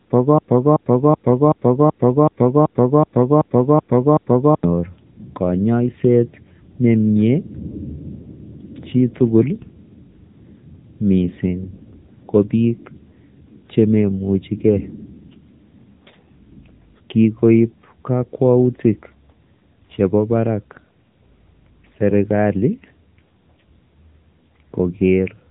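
From start to end, the speech passes through the AMR narrowband mobile codec at a low rate, about 8 kbps. Nothing above 3.8 kHz survives, so it sounds buzzy, synthetic and phone-like.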